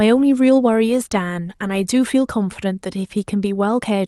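Listening through the speech recording, nothing stood out as a technical problem at any point.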